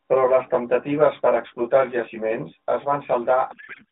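From the start, channel delay (comb filtering) runs through the whole speech clip: one channel lags by roughly 20 ms before the mono sum, so the narrowband line, 200 Hz to 3.7 kHz, sounds rough or slightly doubled. A spectrogram shows fixed, evenly spaced horizontal notches from around 30 Hz upward.

From 3.52 s to 3.92 s a codec payload misread takes over. The decoder unpacks AMR frames with their fields in the wrong positions, which fits octet-aligned framing being read as bandwidth-efficient. The speech turns into garbled, warbling noise that barely tracks it. The spectrogram loses its harmonic structure and shows smeared noisy energy below 4 kHz.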